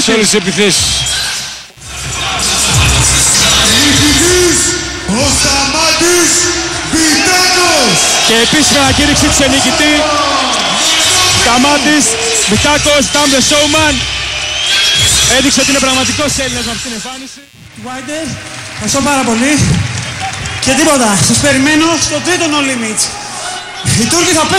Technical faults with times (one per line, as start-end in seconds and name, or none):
0.00-24.59 computer activity noise